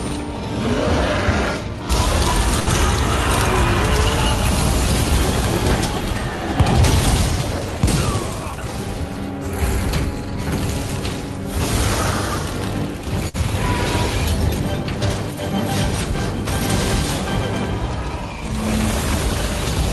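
Short stall from a late packet at 2.59 s: a packet arrived late, the jitter buffer ran dry, and the receiver held the last sound for about 73 ms until the packet came in, then carried on from the same point. Nothing is lost, but the sound at that moment is drawn out, with a faint buzzy or dipping quality.

Jitter buffer speed-up from 8.12 to 8.68 s: the buffer had built up more audio than its target, so the receiver trimmed short pitch-period-sized slices again and again, taking out roughly 70 ms in total. Over this half-second the audio plays at about 111% speed without any change in pitch, giving a rushed feel.

Short stall from a late packet at 13.29 s: the same fault as at 2.59 s. The buffer emptied and the receiver stretched the last sound for about 53 ms before resuming where it left off. Nothing is skipped, but there is a brief held, slightly buzzy spot.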